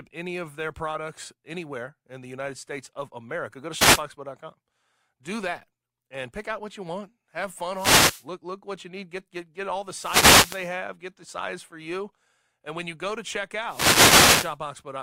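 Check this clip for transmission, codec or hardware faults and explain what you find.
The speech carries four wireless microphone noise hits, all of the same kind: 3.73 to 4.04 s just after "go to", 7.72 to 8.27 s, 9.84 to 10.78 s after "get get all", and 13.65 to 14.57 s after "you go to check". Each occurs when reflected radio paths cancel the FM signal, so receiver noise surges, heard as a swish or burst of static.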